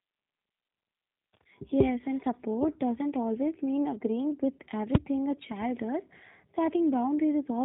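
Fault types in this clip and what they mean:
G.729 codec: Speech is carried through a low-rate coder that rebuilds each 10 ms frame from a vocal tract filter, a pitch predictor and a handful of pulses. Here the damage is plainly audible. The voice has a rough, synthetic edge, and nothing survives above 3.8 kHz, so sibilants and breath sound dull. The character points to G.729A at 8 kbit/s.
Invalid numbers at full scale: A processing step produced infinite or invalid values, which were clamped to maximum positive or negative level for one block. At 4.95 s, between "always mean agreeing with" and "a child does", the output sits flat at one extreme value, far beyond the speech peaks, for about 2.7 ms, which fits a 128-sample block. Because the block is so short, the separate start and end pops merge into a single loud bang.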